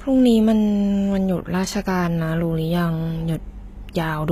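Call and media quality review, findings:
HE-AAC compression, throughout speech. Sibilants gritty and lispy, upper band bright but synthetic, plainly audible; nothing above 14.9 kHz. Likely cause: HE-AAC v2 at a low rate, fitting roughly 20 kbps, with the treble rebuilt from copied lower bands, so harmonics misalign above the crossover. Unlike a plain low-pass or bandwidth cut, treble energy is still present but metallic rather than dull. Unlike MP3 swirl, the damage sits mainly in the top band.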